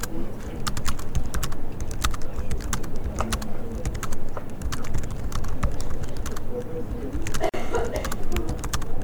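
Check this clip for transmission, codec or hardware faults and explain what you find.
There's one fault here: a gap at a join of encoded pieces, running from about 7.49 to 7.54 s. The sound drops out for roughly 43 ms, with edges smeared by the codec, and then picks up exactly where it left off. That's what you get when separately encoded segments are butted together untrimmed: the encoder's start-up delay and the padded final frame both survive as a short hole of silence.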